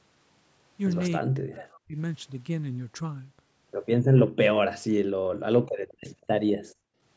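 From 1.1 to 1.97 s the speech sinks in and out, with about 0.7 s of it pulled down, at worst by around 40 dB, so words arrive thinned and broken. This is speech suppressed in double talk, likely from the far side talking at the same moment, so the echo canceller could not tell the near voice from loudspeaker echo and attenuated both. On a waveform the envelope collapses in ragged notches. A spectrogram shows the harmonics fading, upper bands first, with the call band already ending at 8 kHz.

Background gated by the echo canceller occurs at 4.11 to 4.4 s, 5.71 to 5.97 s and 6.55 to 7.01 s. While the loudspeaker was active, the canceller clamped the microphone, dropping the room sound by about 40 dB for roughly 0.2 s, 0.15 s and 0.5 s. Each drop is heard as a sudden hollow silence before the ambience snaps back. The waveform's noise floor falls to near flat, and the spectrogram shows dark vertical gaps across the band.

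An echo leak appears at 5.9 s and again at 6.2 s. These are faint repeats of speech trailing the original by 197 ms, the first some 30 dB down and the second fainter still. Residual loudspeaker sound that the canceller missed was likely sent back. Each scrap is short. A spectrogram shows a weak copy of the preceding harmonic pattern shifted about 0.2 s later.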